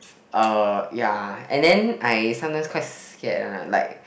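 From 1.64 to 2.15 s the speech hits hard clipping: the signal overshoots what the chain can pass by about 4 dB, so peaks are cut flat. Loud syllables gain a crackly grit; the waveform shows squared-off tops, and the spectrogram shows harmonics smeared upward.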